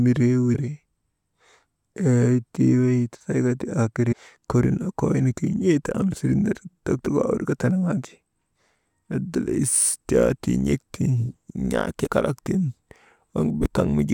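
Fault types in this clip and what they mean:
Damaged data in a compressed stream: four very short chirps or blips cut into the speech, at 0.54 s, 4.11 to 4.13 s, 7.06 s and 12.05 to 12.08 s, each lasting only about 20 ms. They come from corrupted bytes in the compressed stream. When the decoder reaches those frames it misreads or rejects them, loses its place, and briefly emits garbage while it searches for the next valid frame header.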